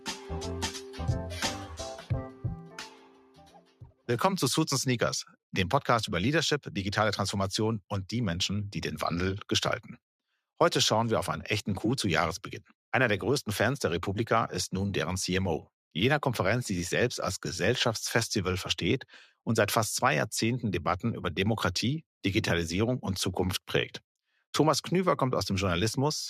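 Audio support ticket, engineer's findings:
Noise suppressor applied to music or sounds, whole clip. A speech-tuned suppressor left in the chain treats sustained tones and ambience as noise. Gain rides up and down by around 5 dB, so held material pumps and thins while attacks pass. Waveform: envelope breathing between transients. Spectrogram: sustained partials and reverb tails fading in patches, onsets intact.

Sound cut by the noise suppressor, 0.0 to 0.31 s and 0.72 to 0.99 s. Same suppressor clamping harder on steady content, dropping it by about 12 dB and about 9 dB. Each is roughly a third of a second of sunken level. 1.94 to 4.08 s: deepest dip, about 13 dB, with about one and a half seconds affected, decays cut short. Waveform: notched-out amplitude. Spectrogram: darkened bands across sustained energy.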